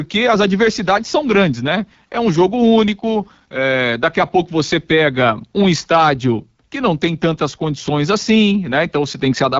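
Speech runs the whole way through the AMR wideband (HD Voice) codec at a rough, raspy low rate, which fits 8.85 kbit/s. A spectrogram shows a hard ceiling at 7.6 kHz and smeared noise in place of harmonics above 6.4 kHz.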